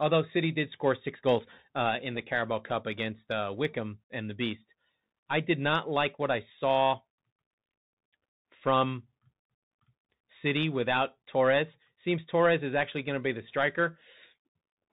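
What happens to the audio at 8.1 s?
At 8.1 s you're hearing the Bluetooth CVSD headset codec, which runs through the whole clip. It sends one up-or-down bit per sample, consistent with a 64 kbps stream, and nothing above 4 kHz survives, the s sounds get scratchy, and a grainy hiss sits under the speech.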